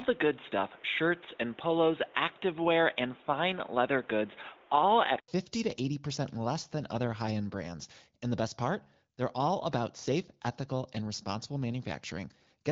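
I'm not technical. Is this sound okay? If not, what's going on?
No. From the start until 5.28 s the sound is dull and boxy, with nothing above 3.8 kHz and faint background noise. A brief 80 ms gap follows, then it clears and shifts slightly in loudness. This is likely an input switched to a poorer device.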